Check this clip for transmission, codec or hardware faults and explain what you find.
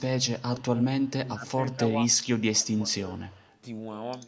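Two faults are present, and both point to echo control on a call.

Speech suppressed in double talk occurs at 0.5–0.9, 1.2–1.51, 1.73–1.81, 2.08–2.16 and 2.55–3.31 s. The speech dips in level each time, by up to about 20 dB in the last stretch. The likely cause is an echo canceller that could not tell this talker from the far side and turned both down.

Echo leak appears at 1.03–1.11 and 3.28–3.56 s. A faint delayed copy of the speech follows, about 35 dB below it. The lag is 117 ms in the first stretch and 150 ms in the second. The likely cause is a loudspeaker's echo canceller that let part of its microphone pickup back into the call.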